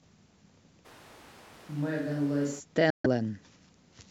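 Speech, with two faults. From 0.87 to 2.58 s the sound turns abruptly roomy, thinner and roughly 5 dB quieter, likely a switch to a distant microphone; the spectrogram shows weaker low frequencies and a raised noise floor between hard edges. From 2.90 to 3.06 s a Bluetooth dropout leaves about 140 ms of silence, a sharp-edged flat gap in the waveform, which likely fits several lost packets.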